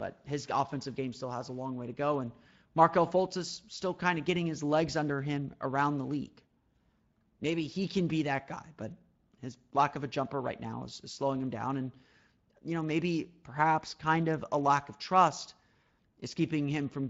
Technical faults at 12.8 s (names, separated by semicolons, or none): Speex codec